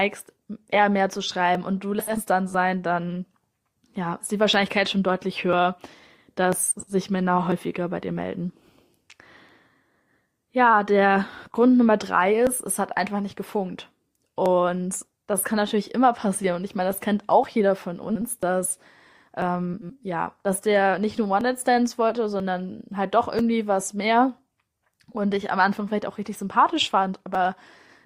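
Periodic USB or driver dropouts run through this speech from 0.56 to 27.35 s: every 0.99 s roughly 10 ms is skipped, giving about thirty evenly spaced ticks. Frames out of order occur at 1.99 to 2.21 s, 6.71 to 6.94 s, 18.09 to 18.23 s and 19.74 to 19.91 s, where neighbouring blocks of 80 ms (60 ms in the third case) play swapped, causing a garbled flutter.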